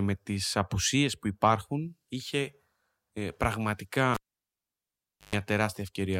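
At 4.14 s a cable is pulled and plugged in: a pop, about 1.2 s of near silence, 0.12 s of 50 Hz mains buzz as only the tip touches, then a pop at 5.35 s. Waveform: spikes framing a flat gap. Spectrogram: stacked 50 Hz harmonic lines.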